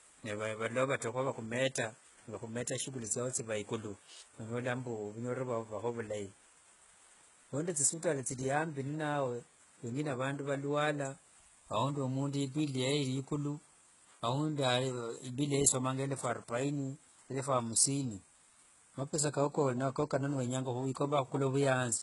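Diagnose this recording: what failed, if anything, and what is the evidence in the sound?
The codec stage failed. Across the whole speech clip, nothing reaches above 11.1 kHz, and s sounds come out gritty and metallic. The treble is rebuilt from copied lower bands, so its harmonics miss the originals. The cause is likely HE-AAC compression. The heavy damage fits a bitrate near 12 kbps.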